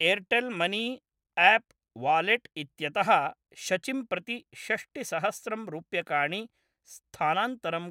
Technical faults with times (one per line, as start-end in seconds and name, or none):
none